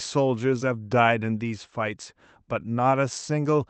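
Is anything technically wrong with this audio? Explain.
No, nothing is technically wrong; the speech shows only the ordinary band-limiting of a call path, with no content much above 8 kHz, consistent with an Opus call link.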